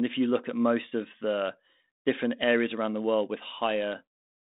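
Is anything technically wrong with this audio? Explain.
No, nothing is wrong: the speech sits on a 32 kbit/s G.726 ADPCM telephone path with its normal 200 Hz to 3.7 kHz band and only the light coding texture expected at that rate.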